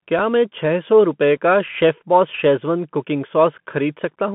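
From start to finish the speech sounds thin and boxed in, as if heard down a phone line. The band runs only from about 150 Hz to 3.4 kHz, with nothing above 3.8 kHz, and a granular hiss sits beneath it. S sounds come out scratchy, and louder high-pitched moments break up. This is a Bluetooth CVSD headset codec, which fits a 64 kbps link. It sends one up-or-down bit per sample with an adapting step size, and fast, loud changes outrun that step.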